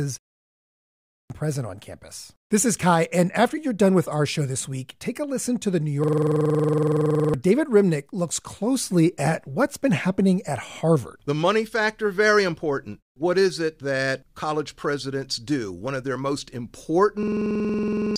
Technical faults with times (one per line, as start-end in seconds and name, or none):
0.28-1.30 system hang loop
6.04-7.34 system hang loop
17.23-18.16 system hang loop